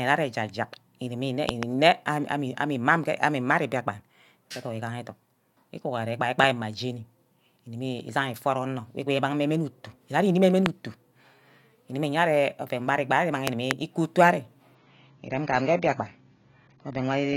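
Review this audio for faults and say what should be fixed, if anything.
Six loud pops, in four bursts, sit on top of the speech, which carries on beneath each one: a double pop from 1.49 to 1.65 s peaking about 20 dB above the signal, a single pop at 6.44 s about 15 dB up, another single at 10.66 s about 25 dB up, and a double from 13.47 to 13.73 s, also about 25 dB up. Each is a sharp, brief transient shaped by the downstream circuitry, likely caused by voltage steps from connector handling, switching or static discharge. To prevent these, secure cabling, avoid hot-plugging or switching during recording, and ground the chain properly.

From 14.75 s to the end, the audio switches abruptly, with no gap, to a thinner, more processed sound. Nothing is present above about 7.1 kHz, so sibilance and air vanish and codec artefacts become more prominent. This is an adaptive stream at a lower bitrate. 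The player dropped to a cheaper rendition when throughput fell, and the bandwidth loss fits a change from roughly 96 kbit/s AAC-LC down to about 24 kbit/s. To prevent it, capture or deliver from a fixed high-bitrate source, or set a bitrate floor on the adaptive player.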